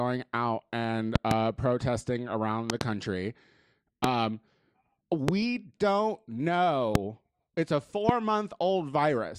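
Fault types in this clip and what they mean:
Loud pop: A sharp electrical pulse lands on top of the speech, which carries on underneath. Its likely cause is a sudden voltage step from a plug, switch, static or driver glitch, shaped by the circuits after it. Eight pops stand far louder than the speech. The first two are double pops: at 1.16 s, just after "out and", and at 2.70 s, after "protesting around". Single pops follow at 4.04, 5.28, 6.95 and 8.09 s.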